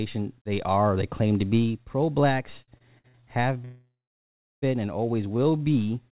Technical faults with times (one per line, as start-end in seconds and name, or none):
2.62-3.23 repeated stalls (stutter)
3.65-4.64 call audio freeze
5.37-5.69 jitter buffer slow-down